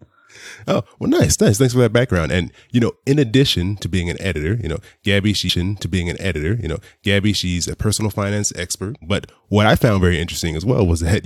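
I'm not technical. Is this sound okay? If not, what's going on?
No. There's a stream segment repeated from 5.48 to 7.48 seconds. Roughly two seconds of the speech play a second time, so you hear the same stretch again, with a small blip where it jumps back. This happens when the player grabs or lines up the same chunk of the stream twice and plays both copies one after the other. The repeat also makes the clip about two seconds longer than it should be.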